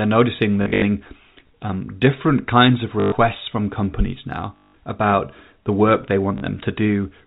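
Speech with short robotic stutters at 0.62–0.82 s, after "um different kinds of" at 3.0–3.12 s, at 4.56–4.74 s, and after "about the work they" at 6.38–6.42 s. These come from packet loss with the last packet repeated, buzzing at roughly 50 Hz, which fits 20 ms packets, over G.711 telephone coding.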